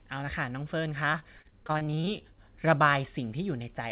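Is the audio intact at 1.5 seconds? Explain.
No. At 1.5 seconds the audio sits inside a stretch of repeated packet loss running from 1.12 to 2.24 s. Fifteen separate gaps fall in that span, the longest 30 ms, and each is patched by extending the last received sound, so about 28 percent of the stretch is concealed rather than real. The speech therefore sounds choppy, with brief repeats in place of missing pieces, heard through the call path's G.711 band limit at 4 kHz.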